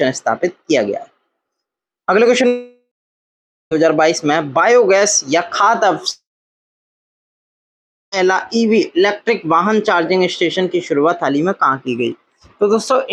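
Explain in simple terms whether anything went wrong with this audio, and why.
Twice the connection likely stalled in a long network dropout, at 2.47 to 3.73 s and 6.11 to 8.14 s. A brief fading buzz gives way to silence, and the missing audio never returns.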